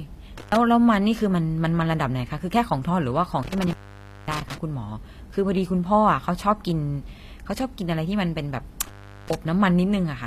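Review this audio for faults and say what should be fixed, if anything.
The treble throughout is gritty and metallic, with s sounds turning lispy and nothing above 14.9 kHz. That is likely HE-AAC compression, which rebuilds the top band from copied lower harmonics that don't line up, fitting a low bitrate near 24 kbps. A spectrogram shows a hard ceiling at 14.9 kHz and a smeared, repeated-looking upper band. Re-encoding from the original source at a higher bitrate, or with plain AAC, would prevent it.

Intermittent contact cuts the sound three times: 0.38 to 0.56 s (open about 105 ms), 3.43 to 4.58 s (open about 548 ms), and 8.82 to 9.35 s (open about 388 ms). A loose connection breaks the signal, with crackle at each edge. The waveform drops to a thin hiss floor between sharp spikes. Replacing or reseating the suspect cable and plug, then securing it, would prevent recurrence.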